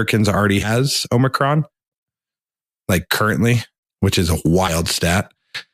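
At 0.62 s and again at 4.67 s, compressed frames are skipped: the speech jumps forward, losing about a tenth of a second, then roughly 40 ms, which fits whole 10 ms frames going missing. A spectrogram shows harmonic tracks breaking off abruptly, with a brief vertical mark at each join.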